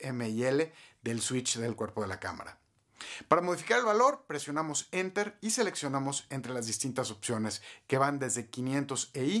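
Nothing stood out on listening; no fault could be heard anywhere in the audio.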